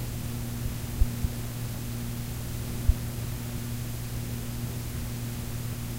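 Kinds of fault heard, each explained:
No faults can be heard.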